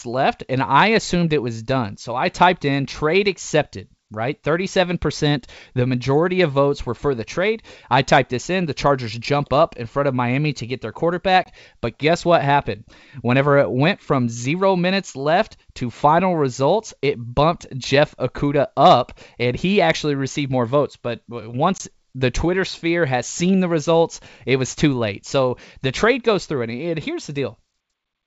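Packet loss on an ADPCM call hits at 11.44 to 11.47 s, right after "to get their", and again at 21.78 to 21.81 s. Each time about one packet's worth, 20 ms, drops to a hard-edged silence. The decoder's predictor and step size then lose track of the sender's, so the speech comes back slightly distorted before settling, over clear G.722 wideband sound.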